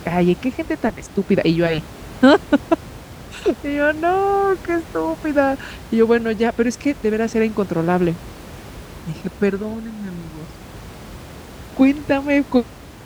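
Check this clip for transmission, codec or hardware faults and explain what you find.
No transmission, codec or hardware fault can be heard in the speech, and the only thing beneath it is room noise at about 19 dB below the speech level, which belongs to the recording rather than to the system.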